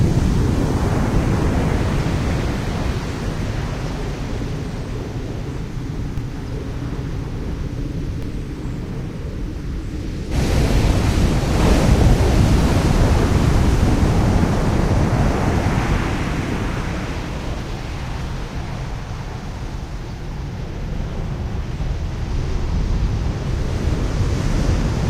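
At 6.18 s and again at 8.23 s, a DC step shifts the waveform's zero line abruptly. Each produces a single low thump that fades as a roughly 5 Hz high-pass pulls the offset back. Unlike a dropout or click from missing samples, the sound carries on uninterrupted underneath.

At 10.31 s the audio skips ahead. About a second of material was discarded because later audio was already queued, and the two sides are butted together with no silence or fill. This differs from a dropout because nothing pauses. The sound simply jumps to a later point.

From 17.19 to 21.45 s a jitter buffer speed-up trims the excess buffered delay. Short pitch-period slices are repeatedly cut out, about a tenth of a second in total, so the sound runs at 103% speed with unchanged pitch. It is not a resampling fault, because pitch would rise with resampling.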